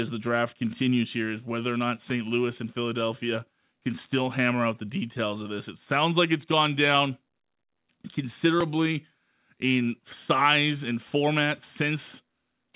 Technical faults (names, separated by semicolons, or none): none